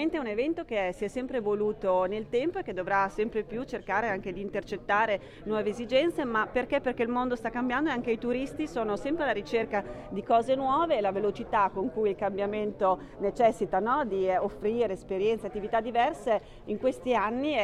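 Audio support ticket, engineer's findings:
Listened through the whole clip and nothing came up worth flagging, so no fault to log on this one.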